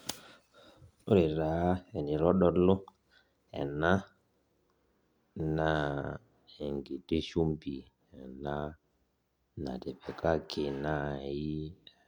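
No audible dropouts, distortion, timing errors or other technical faults occur anywhere in the speech.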